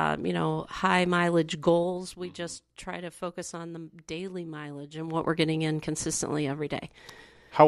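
It's a speech clip with zipper noise in two spots. Right after "you know high", from 1.48 to 2.28 s, the level drops by roughly 10 dB in 2 dB jumps, about seven a second, and each jump ticks audibly. From 4.92 to 5.28 s, just before "we're getting in consistently", it climbs back about 10 dB, again in 2 dB steps but faster, around fifteen a second. The gain is being stepped with no smoothing between values.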